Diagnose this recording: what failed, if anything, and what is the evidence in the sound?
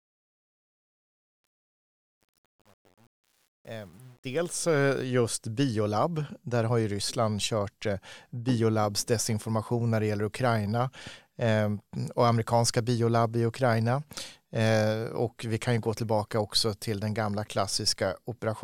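A gain stage kept too few bits without dither, causing truncation distortion on a fade: from 0.0 to 4.64 s the quiet fade-in sounds gritty, consistent with roughly 8-bit resolution.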